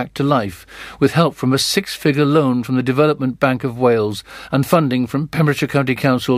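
Nothing in the speech stood out as a technical problem on listening.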